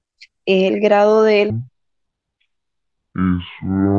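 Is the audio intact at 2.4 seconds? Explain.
No. At 2.4 seconds the speech sounds dragged and deep, running at half speed and a full octave (12 semitones) lower than before. This is a wrong sample rate fault, lasting from 1.50 s to the end of the clip. The samples are being played at about half the rate they were captured at, which fits 44.1 kHz audio played at 22 kHz, with no conversion, so timing and pitch both drop by that same ratio.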